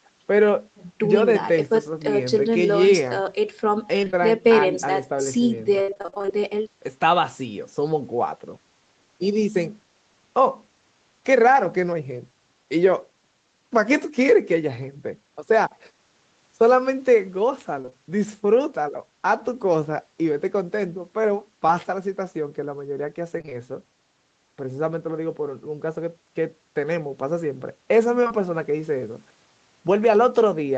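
Choppy, robotic stretches with bits of sound missing break up the speech from 4.01 to 4.22 s and, most heavily, from 5.82 to 6.30 s. This is repeated packet loss (robotic sound): gaps kept arriving, each patched by extending the last sound. Around 6 s the patching fills about half the span, with holes up to 62 ms.

The same robotic chop returns briefly at 17.82 to 17.93 s.

A short smear or wobble at 21.67 to 21.81 s is short concealed packet loss. About 20 ms never arrived and was filled in, adding a slight delay.

Choppy robotic sound recurs at 23.38 to 23.54 s, with gaps up to about 21 ms.

Two back-to-back smears at 28.24 and 28.28 s are further short concealed packet loss, each a roughly 20 ms hole bridged by continued sound. Throughout, the Opus call codec caps the top end at 8 kHz.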